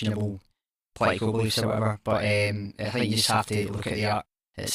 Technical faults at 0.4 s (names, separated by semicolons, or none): channel delay (doubling)